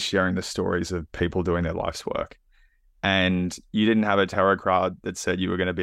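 A speech recording, and nothing is technically wrong with it.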